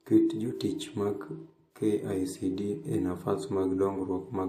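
From start to finish the recording has been through more than one lossy encoder, a fault known as transcoding between lossy codecs. The character of the artefacts fits a low-bitrate MP3 pass that was likely re-encoded as WMA at a somewhat higher rate. The second encoder spends its bits on the first one's artefacts and adds its own, so both sets sit on the speech together. Nothing remains above 15.2 kHz.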